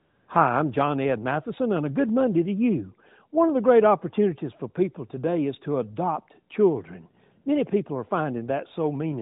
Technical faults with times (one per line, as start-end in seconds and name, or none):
0.00-0.28 AMR comfort noise